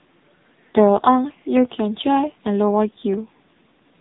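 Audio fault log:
throughout, AMR narrowband mobile codec: The speech has passed through the AMR-NB mobile speech codec, which models the vocal tract and excites it with only a few pulses per short subframe. Nothing above about 3.8 kHz survives, so consonants lose their crispness and the whole clip sounds boxed-in and telephone-like. The coding damage is heavy, leaving the voice buzzy and synthetic, which points to one of the codec's low modes, around 6.7 kbps.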